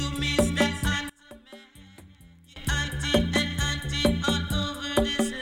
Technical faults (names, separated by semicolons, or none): one channel inverted